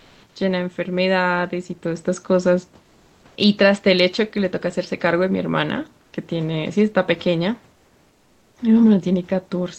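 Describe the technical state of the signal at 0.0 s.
At 0.0 s the clip opens with comfort noise in place of the background, lasting until about 0.35 s. For that first third of a second, the room background is heard as a smooth, featureless hiss, about 3 dB quieter than the real background that follows. The likely cause is discontinuous transmission in the Opus-coded call path: the sender stopped transmitting during the pause, and the receiver filled the gap with synthetic noise shaped roughly like the room background.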